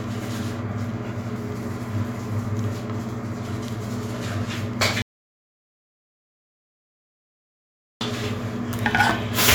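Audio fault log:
5.02–8.01 s, audio dropout to silence: the sound cuts off mid-flow and leaves about 3 s of silence, with no room tone at all, before snapping back. That's likely the input dropping out while the recorder kept writing silence, so that stretch is simply gone.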